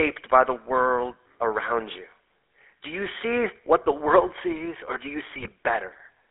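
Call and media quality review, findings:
GSM full-rate codec, entire clip. Speech coded as vocal-tract filter plus coarse regular-pulse excitation, consistent with 13 kbps full rate. Audible buzzy, gravelly roughness throughout; band limited to roughly 300 Hz–3.5 kHz, top end and low body missing. Codec damage plainly audible.

GSM bit errors, 5.36–5.52 s, right after "sees or do you". Corrupted bits reaching the decoder, around 2% error rate, fits about eight damaged frames. Garbled filter, pitch and gain values produce squawks, pops and gargling in that span.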